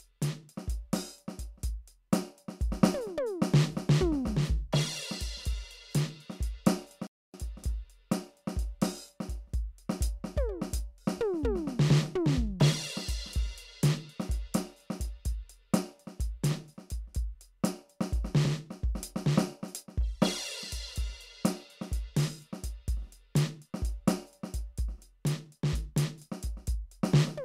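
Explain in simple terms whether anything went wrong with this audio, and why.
The music cuts out at 7.07 s and returns at 7.34 s, a playback stall. The player likely ran short of data for about a quarter second.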